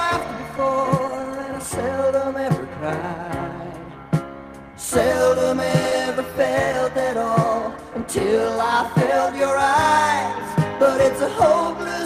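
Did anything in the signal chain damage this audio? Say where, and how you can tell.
Yes. The damage happened at the network stage, as short concealed packet loss at about 5.89 to 5.92 s. A brief smear or wobble is audible there. Part of the stream arrived too late for the decoder. The receiver filled about 16 ms by extending the preceding sound, then crossfaded back into the real audio. About 10 ms of the original sound is gone.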